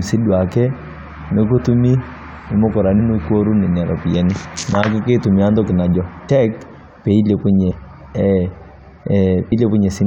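Compressed frames are skipped at 1.57 to 1.59, 2.98, 6.28, 7.70 to 7.72 and 9.51 s. Each time the speech jumps ahead, by roughly 20, 70, 70, 70 and 100 ms. The jumps fit frames of about 23 ms.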